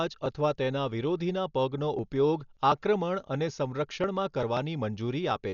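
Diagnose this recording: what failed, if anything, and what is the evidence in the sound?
Codec stage: heavy Dolby Digital compression likely, with nothing above 7 kHz throughout, a spectrogram hard-cut there, and dither-filled bins giving dull speech with rough, fluttering noise, fitting about 48 kbps.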